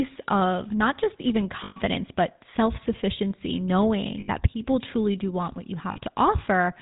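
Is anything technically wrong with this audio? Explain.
Yes. The speech has passed through the GSM full-rate codec, and the sound fits the 13 kbps full-rate coder. This codec models the vocal tract as a filter and excites it with a sparse, regularly spaced pulse train, discarding most of the excitation detail. It also passes nothing above 4 kHz. The result is plainly audible throughout: a dull, band-limited voice with a buzzy, gravelly roughness.

There are three lost GSM frames events, at 1.64 s (about 120 ms, after "of not just even" and before "but self sufficiency"), at 4.2 s (about 80 ms, just before "people truly do want"), and at 5.92 s (about 40 ms, after "do want what you"). In each case the decoder had no valid data, so it reused the last good frame's filter and excitation settings. Each gap is therefore filled with a short, rough, metallic ringing hold instead of the real speech.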